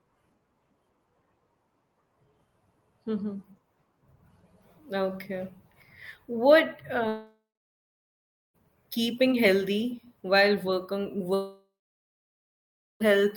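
Long network dropouts at 7.08 to 8.56 s and 11.34 to 13.02 s, likely from audio packets that never arrived: the speech decays into a fading buzz, then about 1.1 s and 1.3 s of silence, before resuming past the lost material, the first time at "keeping healthy while".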